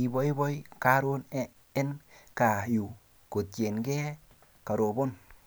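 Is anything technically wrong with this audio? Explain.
Yes. At 0.62 s and 1.77 s the speech jumps ahead, losing roughly 10 ms and then about 30 ms, likely from a dropped buffer (overrun) where samples were overwritten before capture. The waveform shows abrupt discontinuities, and the spectrogram shows thin vertical broadband lines.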